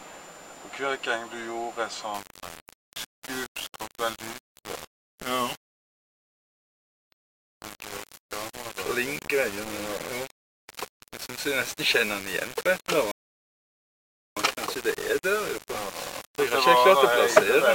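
From 2.14 s to the end, the sound turns grainy and gritty, with distortion that follows the signal. Low bit depth without dither is the likely cause, consistent with rounding to about 6 bits, with the error only about 10 dB down.

There are two rebuffering stalls: the player runs dry and goes silent at 5.69 s for 1.41 s, then at 13.11 s for 1.25 s, each time picking up exactly where it stopped.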